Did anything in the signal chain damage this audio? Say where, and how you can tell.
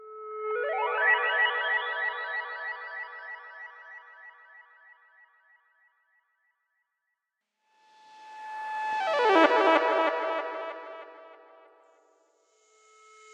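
No, nothing in the signal chain damaged this audio, and no stage leaves any audible mark on the sound.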